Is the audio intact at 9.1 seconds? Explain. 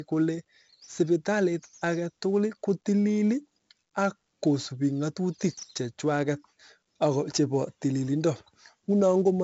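No. At 9.1 s, as across the whole clip, 4-bit ADPCM compression stores each sample as a coarse step from a prediction, giving heavy level-following gritty hiss on the speech. Unlike steady background noise, it drops away in pauses, and nothing above 7.7 kHz survives, which fits a 64 kbps stream.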